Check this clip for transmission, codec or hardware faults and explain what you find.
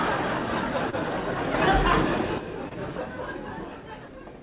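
Two kinds of fault are audible, heard through a call path with nothing above 4 kHz.

Short concealed packet loss occurs at 0.90 to 0.95 s and 2.69 to 2.75 s. Each time a missing chunk is replaced by extended sound, giving a brief smear. The second also drops about 10 ms.

A sudden gain jump runs from 1.54 to 2.38 s. Sound and background noise rise together by about 6 dB, then fall back. This is likely a digital gain change applied without a ramp.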